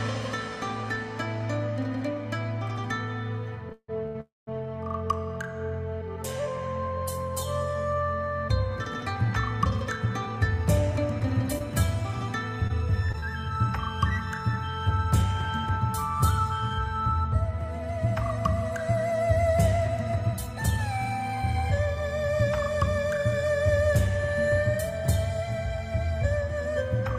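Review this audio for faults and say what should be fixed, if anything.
From 3.69 to 4.16 s the sound catches and drags three times, each hiccup held over rather than cut. The longest hang is 158 ms, and together they fill 251 ms, about half of that stretch, with nothing actually lost. These are repeated stalls (stutter). Packets arrived late or slower than playback, so the jitter buffer kept running dry and the receiver stretched the last sound until fresh audio arrived. A deeper or adaptive jitter buffer on the receiving side, plus a steadier network path, would prevent it.

Right after, from 4.20 to 4.49 s, the sound freezes into a fading continuation that falls to silence for about 190 ms, then resumes where it left off. The pause adds 266 ms of filled time and 266 ms of extra delay, with nothing missing. This is a call audio freeze, likely caused by packets held up in transit, which emptied the jitter buffer until they arrived. 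Reducing congestion on the route and allowing more buffer headroom would prevent it.

From 9.70 to 10.79 s the sound plays noticeably hurried at the same pitch, running at 108% speed. It happens again more gently from 14.97 to 17.08 s at 104%, and from 19.77 to 21.87 s at 107%. This is jitter buffer speed-up. After a backlog built up, the receiver trimmed short pitch-period slices to bring the delay down, roughly 100 ms in each of the first two passes and about 150 ms in the third. Spreading that catch-up more gently, or avoiding the bursts that overfill the buffer, would prevent it.

Between 11.20 and 13.24 s there are about seven brief ticks and smears, none longer than about 20 ms. These are scattered short gaps. Isolated packets were lost, 160 ms of audio in all, and the receiver patched each hole by extending the previous sound, roughly 100 ms of fill covering a small share of the stretch. 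Forward error correction or packet redundancy, together with lower packet loss on the link, would prevent it.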